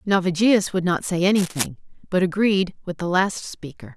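From 1.34 to 1.66 s, a dense, uneven scratching and rustling sits over the speech, roughly 10 dB below it. This is cable scratch noise, likely from a worn cable, connector or control being moved, its contact resistance fluctuating rapidly.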